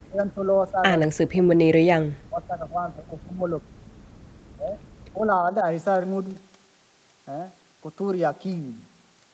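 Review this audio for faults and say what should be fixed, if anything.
The speech dips hard or cuts out in pieces at 0.06 to 0.83 s, 1.07 to 3.79 s, 4.52 to 4.78 s and 5.1 to 5.64 s. The drops reach roughly 30 to 40 dB. This is likely speech suppressed in double talk. The echo canceller mistook the talker for loudspeaker echo while both sides spoke, and turned everything down. Better double-talk detection in the canceller would prevent it.

From 1.02 to 1.08 s there is an echo leak. A short, faint copy of the voice returns about 0.2 s late, roughly 20 dB below the speech. The likely cause is an echo canceller on a loudspeaker side that did not fully remove its microphone pickup. A headset, or better-converged cancellation, would prevent it.

The background is gated by the echo canceller from 4.07 to 4.24 s. The room sound drops by about 40 dB for around 150 ms and then returns. The canceller clamped the microphone while the loudspeaker played. 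Gentler suppression, with comfort noise filling the gap, would prevent it.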